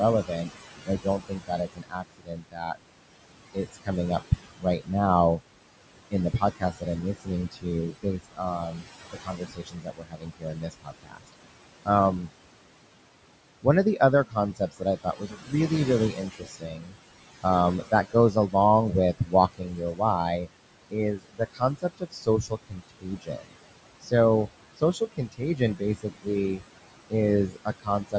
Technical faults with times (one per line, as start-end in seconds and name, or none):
0.00-28.18 noise suppressor artifacts
0.23-2.76 speech cut by the noise suppressor
3.54-5.40 speech cut by the noise suppressor
6.11-12.31 speech cut by the noise suppressor
13.63-24.12 speech cut by the noise suppressor
24.77-28.15 speech cut by the noise suppressor